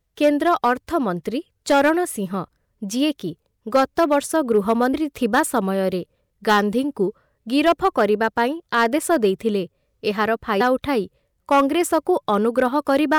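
Throughout the speech, loud syllables carry a gritty crackle on their peaks. This is hard clipping: the signal runs about 7 dB past what a stage in the chain can pass, so a small share of the peaks are sliced flat, adding harsh high harmonics.

At 4.93 s and again at 10.6 s, the speech lurches forward with a short smeared blip rather than a sharp click. These are compressed frames skipped. Whole frames never reach the output, roughly 70 ms of audio at the first point and about 100 ms at the second. The size of each jump points to a few frames of about 26 ms each, and because neighbouring frames overlap, each join blurs instead of snapping.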